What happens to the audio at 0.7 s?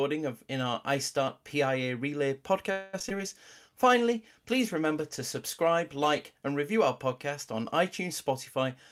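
Nothing goes wrong at 0.7 s; the speech is intact there, with no dropout, click, distortion or other fault audible at that moment.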